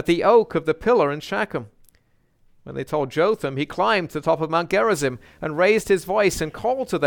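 From 4.71 s onward, video or display buzz: display wiring leaks a faint 75 Hz field-rate buzz, seen as stacked harmonic lines on a spectrogram.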